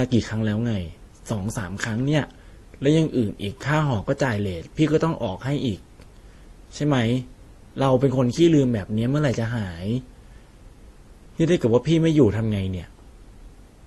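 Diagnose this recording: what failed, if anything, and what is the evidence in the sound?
The failure is at the codec stage, and it runs through the whole speech clip. The top end stops dead at about 18.1 kHz, and two different sets of codec artefacts sit on top of each other. That combination likely comes from transcoding between lossy codecs, consistent with an MP3 around 48 kbit/s re-encoded to Opus around 32 kbit/s. Opus wastes bits re-coding the MP3's artefacts, then adds its own.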